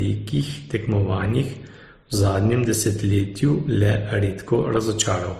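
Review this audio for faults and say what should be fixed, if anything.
Throughout the speech, two different sets of codec artefacts sound together, and nothing is present above 19.4 kHz. The cause is likely transcoding between lossy codecs, fitting a low-rate MP3 re-encoded as low-rate Opus. Encode once, directly from the original uncompressed source.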